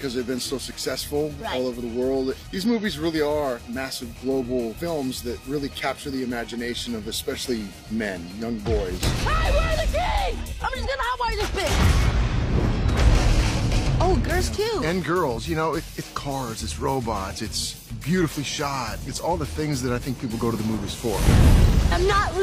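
A brief glitch at 2.95 s in the audio comes from damaged data in a compressed stream. Part of the encoded file is corrupt at that point, so the decoder misreads the affected frame, loses sync, and resumes output once it finds the next valid frame header.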